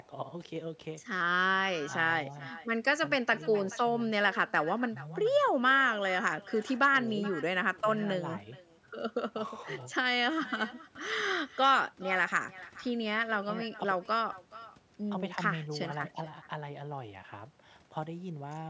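Throughout the speech, every phrase is trailed by a faint, thin copy arriving roughly 400 ms later at about 19 dB below the talker. This is echo with no canceller: the far end's loudspeaker feeds its microphone, returning the sound, which tops out near 8 kHz.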